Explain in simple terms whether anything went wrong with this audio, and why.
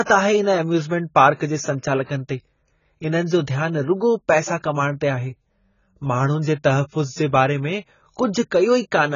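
The speech sounds dull and muffled from start to finish, with a watery, fizzy edge on hissing sounds, and nothing above about 7 kHz. This is likely heavy AAC compression: the encoder squeezed the file hard, discarding treble and fine detail to save space.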